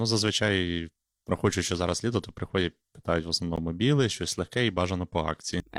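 The time stamps of two consecutive 2-second stream segments fail to meet, leaving a gap between stream segments at 3.56 s, between "то приходять питають в" and "біле щось легке і". The player fills it with 14 ms of silence, a hard-edged dropout in the speech with nothing lost.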